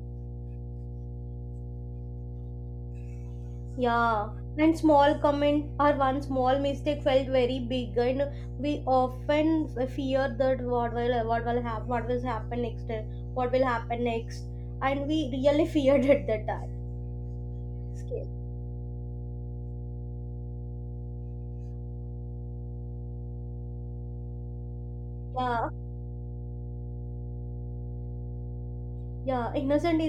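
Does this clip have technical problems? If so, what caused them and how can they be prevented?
Yes. A ground loop or nearby transformer has coupled the 60 Hz power line into the signal path, leaving mains hum throughout the speech: a steady low 60 Hz tone with low harmonics, loud enough to sit only about 10 dB below the voice. Prevent it by breaking the ground loop with balanced cabling, a common ground point or an isolation transformer, and keeping signal leads away from power supplies.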